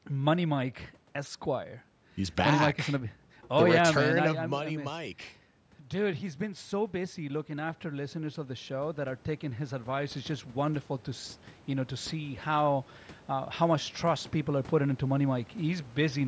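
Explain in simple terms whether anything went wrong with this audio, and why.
From about 6.0 seconds to the end at 16.2, the voice and the background noise swell upward together, slowly and steadily, rather than the voice alone getting louder. That is automatic gain rising. Shortly before, at around four and a half seconds, the talker moved away from the microphone and the sound dropped, so the call's level control judged the input too quiet and kept turning itself up, lifting everything it picked up along with the speech.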